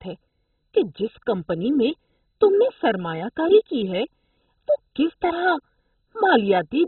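Throughout, the speech sounds dull and muffled, with nothing above about 4.1 kHz, and carries a gurgling, granular roughness. This is likely heavy MP2 compression, which fits a very low rate near 16 kbps, starving the upper sub-bands and coarsely quantising the rest.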